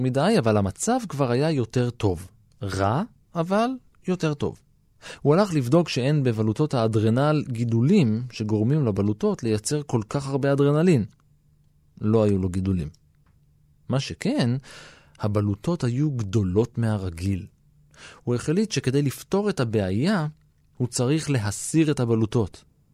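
A speech recording with no audible technical fault. Nothing in it points to a problem in the recording or playback chain.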